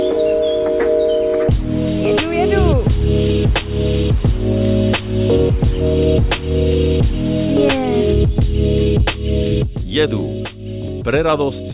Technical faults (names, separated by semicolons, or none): none